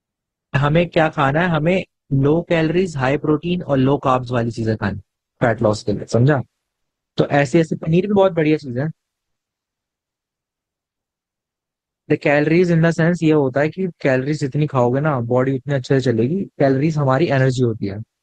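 Speech, with an adaptive stream starting at a low bitrate. From 0.0 to 6.0 s the treble is missing and codec artefacts are strong, which fits about 16 kbit/s Opus. At 6.0 s quality jumps without a gap, consistent with a step up to about 64 kbit/s.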